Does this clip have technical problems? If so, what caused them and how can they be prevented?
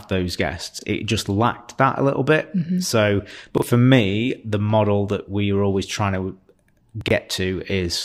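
Yes, chunks out of order at 0.79 s (after "those guests"), 3.58 s (before "for me the model") and 7.01–7.11 s: roughly 23 ms blocks play late, causing a jumbled moment. Reorder by sequence number in the jitter buffer before playback.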